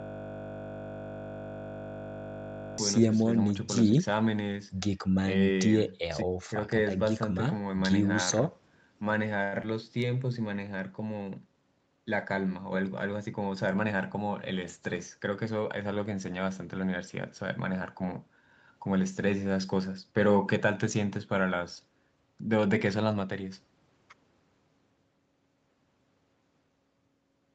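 From the very start until 2.78 s, the clip is caught in a system hang loop. The computer or driver has frozen while the hardware keeps replaying one 20 ms slice of its ring buffer, over and over. Repeated 50 times a second, it merges into a steady 50 Hz buzz rather than a stutter. Unlike a stall, nothing moves forward at all until the loop breaks.

At 9.43 to 9.54 s comes a short stall from a late packet. The jitter buffer ran dry, so the receiver stretched the last sound for 91 ms until the packet turned up, then resumed exactly where it left off. The held sound has a slight buzz or dip. Nothing is lost, but the delay grows by 91 ms.

Shortly after, at 9.62 to 9.65 s, there is a short concealed packet loss. This time, 20 ms of audio never arrived. The receiver extrapolated about 10 ms from the preceding sound and blended back in. The result is a quick smear or wobble, and unlike the stall, a sliver of real audio is actually missing.

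From 13.19 to 13.93 s, a jitter buffer speed-up drains excess buffered delay. The receiver repeatedly cut out pitch-period-sized pieces, about a tenth of a second in all, so the speech runs at 111% speed and sounds hurried. The pitch stays unchanged, which separates it from simple fast playback.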